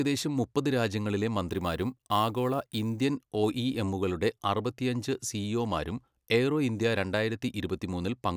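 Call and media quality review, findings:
Crude rate conversion, 1.51 to 3.01 s, after "മുപ്പത് രാജ്യങ്ങളിലെ", ending before "ഒഇഎമ്മുകളുടെ അറുപത്തിയഞ്ച് സിഇഒമാരും എയ്റോ". Gritty inharmonic fizz riding the speech, roughly 25 dB down. Probable resampler picking nearest samples without filtering, consistent with a 32 kHz to 44.1 kHz conversion.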